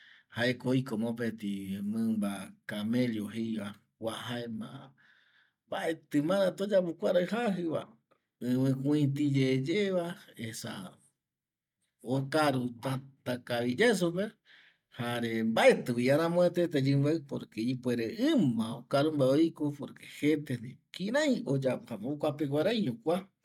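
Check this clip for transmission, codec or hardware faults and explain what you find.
Listening through the speech, I hear no transmission, codec or hardware faults anywhere in the signal.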